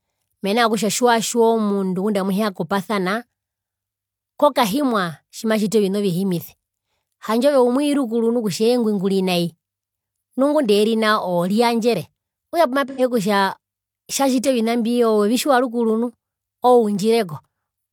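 At 12.89 s, AAC frame loss with concealment runs for about 85 ms, to 13.01 s, which fits two lost frames. The decoder rebuilt the gap from the last good spectrum, giving a smeared, noisy or phasey patch. On a spectrogram it appears as a blurred, detail-free block.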